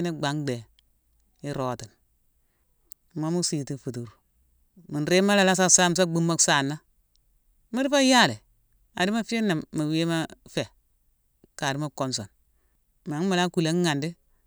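No faults are audible in this recording: no dropouts, glitches, distortion or timing problems appear anywhere in it.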